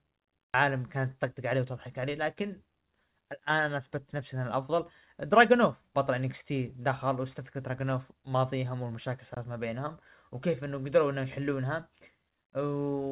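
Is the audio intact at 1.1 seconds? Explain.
No. At 1.1 seconds the speech is inside a jitter buffer speed-up that runs from 0.64 to 1.66 s. Too much audio had built up in the receive buffer. To shrink that backlog, the receiver cut out short slices of one or a few pitch periods, again and again. About a tenth of a second was removed this way. The speech plays at 108 percent speed with its pitch unchanged. It sounds hurried.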